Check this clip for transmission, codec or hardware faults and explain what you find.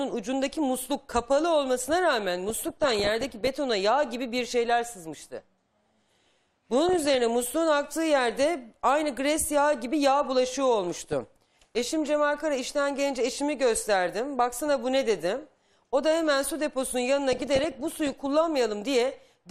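There's one problem here, DAB burbling, in four bursts: 2.49 to 3.47 s, 6.86 to 7.18 s, 10.93 to 11.78 s and 17.32 to 18.26 s. Weak reception lets bit errors slip past error correction into the MP2 data, putting short noise blips into single sub-bands and corrupting scale factors so sub-bands jump in level for up to a frame. You hear it as bubbly, watery blips laid over the sound.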